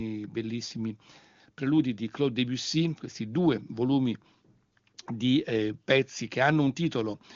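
Listening to this speech recording, carried over the AMR wideband (HD Voice) codec, nothing stood out as a technical problem.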